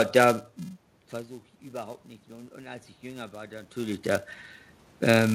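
A speech clip with a buzz at 375 Hz running throughout. This is a filter restarted on every block: each block begins from silence with a small transient, which fits a 128-sample block. Unlike mains hum, the buzz rises and falls with the speech level instead of holding steady. From 1.62 to 4.33 s, just after "da hm versuche ich", the input drops by about 17 dB and the automatic gain rises, raising voice and room noise together by about 5 dB over nearly three seconds. That shared swell of the background is what separates it from the talker moving near 0.5 and 3.5 s, where only the voice changes level.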